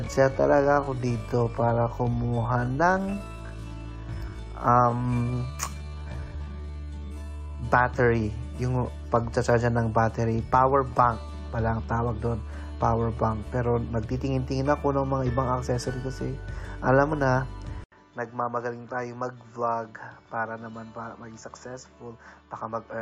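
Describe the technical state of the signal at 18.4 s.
At 18.4 s the audio is inside a stretch from 17.84 s to the end, where the input was likely switched to a poorer device. After an 80 ms gap the level drops about 10 dB, the band narrows, and a new, faint noise floor appears. That combination sets it apart from a simple filtering change.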